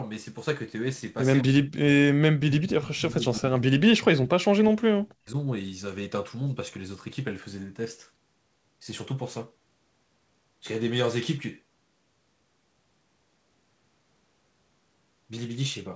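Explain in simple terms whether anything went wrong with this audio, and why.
Speech suppressed in double talk: the speech fades or nearly vanishes at 1.42–1.86, 2.17–2.22, 2.39–3.92 and 4.2–5.36 s, likely an echo canceller muting overlapping talk.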